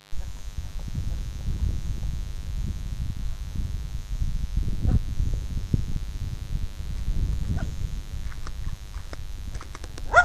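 From start to finish there's a mains buzz running under the sound, a steady raspy edge built on 50 Hz. Sharp switching spikes twice per cycle stack harmonics well up into the kilohertz range, and it sits roughly 25 dB below the signal.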